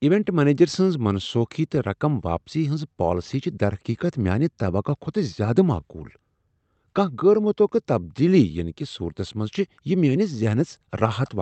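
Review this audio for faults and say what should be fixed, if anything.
Clock drift between sender and receiver runs throughout. The sender's clock is about 2% slow, so the jitter buffer keeps draining and the receiver must stretch the stream to keep up.

Repeated timing corrections occur from 0.24 to 11.23 s. The receiver repeats short pieces at uneven intervals, adding roughly 200 ms and slowing playback to 98% speed.

To prevent this, use adaptive resampling at the receiver so drift is absorbed smoothly instead of through repeated piece insertions.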